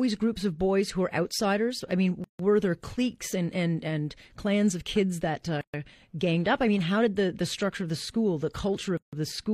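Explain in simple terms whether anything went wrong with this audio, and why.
Gaps at joins of encoded pieces appear three times: from 2.24 to 2.39 s, from 5.61 to 5.74 s, and from 8.97 to 9.13 s. Each is a short hole in the speech, about 130 to 150 milliseconds long, with smeared edges. The speech then resumes exactly where it stopped. The audio was compressed in separate pieces and stuck together untrimmed, so each join keeps the encoder's leading silence and end padding.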